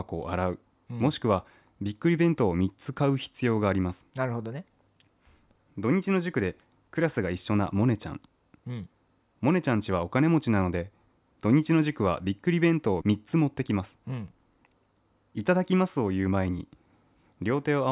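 No technical faults can be heard anywhere in the speech recording, and the signal stays steady and continuous throughout.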